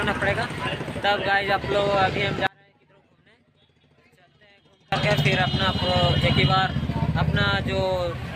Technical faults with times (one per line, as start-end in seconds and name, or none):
2.47-4.92 audio dropout to a faint residue